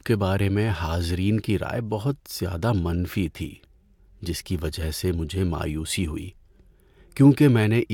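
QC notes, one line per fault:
No faults found; nothing to log for this speech clip.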